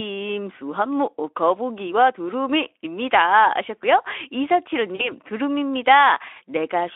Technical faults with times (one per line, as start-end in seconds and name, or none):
4.95-5.11 VoIP packet loss concealed by the speech codec